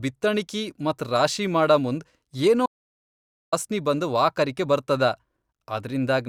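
After "ಮತ್ ರಾಶಿ ಮಾಡಮುಂದ್ ಏನೊ", the speech cuts to dead silence from 2.66 to 3.52 s, resuming at "ಬಂದ ವಾಕರಕಿ ಬರ್ತದ": an audio dropout to silence, likely from a lost input.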